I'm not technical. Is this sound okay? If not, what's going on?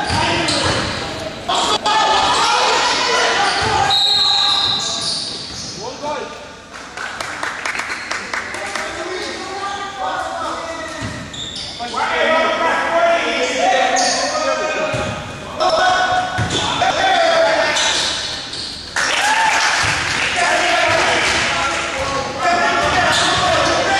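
No. There are chunks out of order at 1.49–1.86, 7.71–7.90, 15.60–15.79 and 16.81–17.00 seconds. A 93 ms slice plays late, after the ones meant to follow it. In the first, it's three slices late. Nothing is lost. Each spot sounds jumbled.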